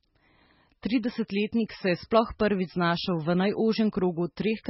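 Throughout the speech, the treble is cut off sharply at about 5.6 kHz, and heavy swirly, watery smearing sits on the sound. Both point to MP3 compression, likely at a very low bitrate around 16 kbps, with weak frequency lines dropping in and out between frames.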